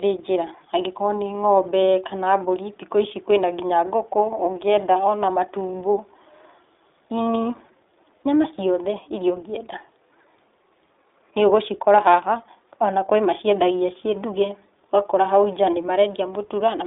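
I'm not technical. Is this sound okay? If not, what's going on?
No. The speech went through the iLBC codec, a phone-call compression system that squeezes the sound into 20 ms chunks and handles each chunk on its own, and it does this for the whole clip. Everything below about 300 Hz and above 3.7 kHz is cut away, so the speech sounds thin and boxy, like an old phone line, with a plainly audible rough, slightly artificial edge throughout.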